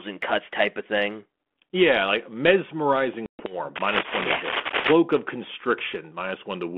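At 3.26 s the speech drops into a hard-edged hole lasting about 130 ms, which fits roughly fifteen short packets going missing: packet loss on an ADPCM call. The waveform shows a flat silent stretch; on resuming, the decoder's predictor and step size no longer match the sender's, so the speech around 3.6 s comes back slightly distorted before settling.

From 3.75 to 4.93 s, cable scratch noise lies over the speech at about the same level as the voice: dense, ragged crackling bursts, likely from a worn cable or connector being moved. A spectrogram shows irregular vertical broadband smears across the 250 Hz to 3.4 kHz band of the 32 kbit/s G.726 line.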